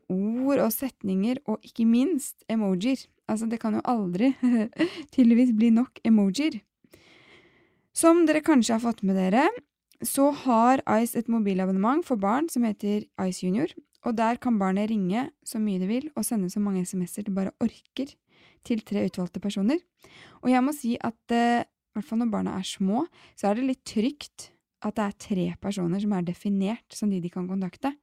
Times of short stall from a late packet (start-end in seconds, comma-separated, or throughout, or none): none